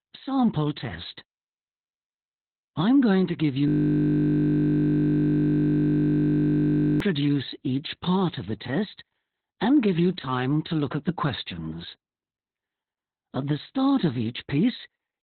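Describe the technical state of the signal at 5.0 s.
At 5.0 s the signal is caught in a system hang loop that runs from 3.68 s to 7.00 s. The machine or its driver stopped supplying new audio while the sound hardware kept replaying the same stretch of its ring buffer. A single 20 ms fragment repeats well over a hundred times, so the sound becomes a steady, flat buzz at 50 Hz, the loop rate, rather than moving speech.

The same moment also carries the Opus voice compression that affects the whole clip. The band stops at about 4.3 kHz, which points to narrowband coding with the SILK linear-prediction coder in 20 ms frames, at a very low bitrate of around 8 kbps. The excitation is coarsely quantised, so the damage is heavy: the speech sounds muffled, hoarse and slightly robotic. That dull, band-limited colour is baked into the fragment being looped, so the buzz has no bright edge above 4.3 kHz.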